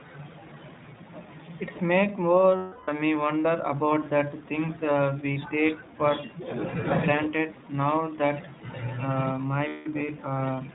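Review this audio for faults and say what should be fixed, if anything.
The whole clip carries iLBC codec damage. Nothing above 4 kHz survives. The speech sounds rough and slightly synthetic, plainly so. Each frame's excitation is coded on its own, and the grain points to the 15.2 kbps mode with 20 ms frames. Prevent this by using a wideband codec such as Opus on the link.

Lost iLBC frames occur at 2.56 to 2.90 s and 9.68 to 9.88 s, about 320 ms and 180 ms long. Each gap becomes a held, buzzy vowel. The decoder repeats the last pitch cycle with added noise, fading as it goes. The voice recovers almost at once. Prevent this with packet redundancy or forward error correction and a larger jitter buffer.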